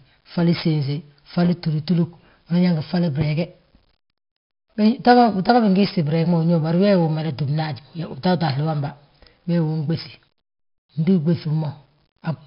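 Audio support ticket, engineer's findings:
Gritty hiss riding on the speech for the full clip, rising and falling with level. Crunch on sharp onsets. Dull, muffled top with nothing above 5.3 kHz. Cause: heavy 4-bit ADPCM compression. Each sample stored as a coarse 4-bit step from a prediction, so quantisation noise tracks the signal, and the adaptive step can't grow fast enough on attacks. Band limit points to an 11 kHz sample rate, which fits a stream of about 44 kbps.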